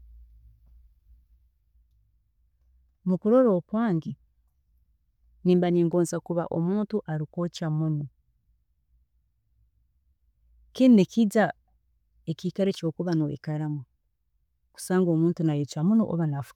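A block of digital silence at 5.93 s cuts into this speech clip for about 2.3 ms, just before "kuba omuntu arikwookya muno". At that instant the sound cuts out and returns with no fade, so the two hard edges merge into a single tick rather than an audible gap. A hole this short points to the playback or processing code failing to fill its output buffer in time, leaving a stretch of zeros in place of audio.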